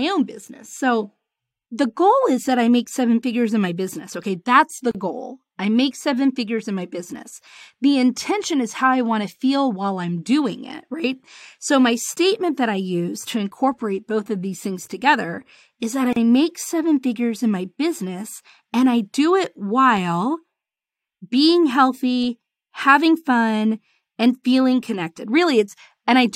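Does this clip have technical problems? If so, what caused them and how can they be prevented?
Yes: two gaps at a join of encoded pieces, about 35 ms of silence at 4.91 s after "that's the" and at 16.13 s after "things together is that". Encoder start delay and last-frame padding were left in, and the sound resumes exactly where it stopped, unlike a dropout. Trimming encoder delay and padding before joining prevents this.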